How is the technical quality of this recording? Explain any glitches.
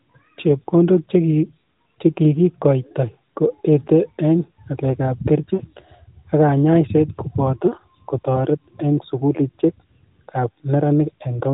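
The recording comes through a narrowband AMR mobile codec, so nothing above 4 kHz is present, and it has one glitch.

At 5.54 to 5.62 s there are lost AMR speech frames. About 60 ms is missing, which fits three 20 ms frames failing their checksum. The decoder bridges the gap by repeating the last good pitch and vocal tract settings at falling gain. You hear a short, stretched smear that fades down, then the speech resumes briefly weak or rough.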